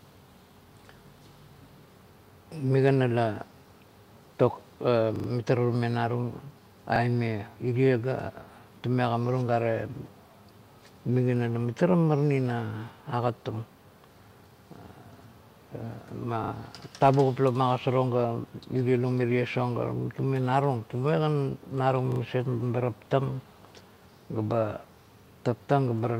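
Four repeated-buffer stutters turn up in this speech. Each time new audio didn't reach the device in time, so it replayed the same 40 ms chunk, which fits a 40 ms buffer, with a hard join at every repeat. At 5.16 s it plays three extra times, giving a short stutter to 5.28 s. There's a single repeat at 6.96 s, and two each at 16.44 s, just before "tavugup la ma", and at 22.12 s, just before "maset meba". None of them seems to drop audio.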